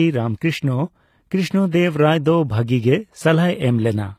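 Throughout the speech, the treble sounds rebuilt rather than real, with gritty, lispy s sounds, likely HE-AAC compression at a low bitrate near 24 kbps. A spectrogram shows upper bands copied from below.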